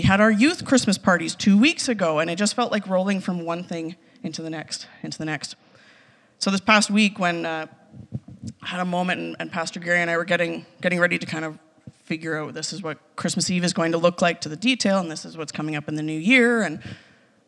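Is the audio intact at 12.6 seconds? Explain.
Yes, the audio is intact at 12.6 seconds, with no fault to be heard at that point.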